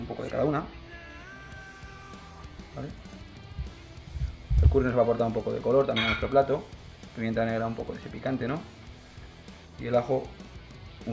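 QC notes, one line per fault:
No faults found on listening; nothing to log.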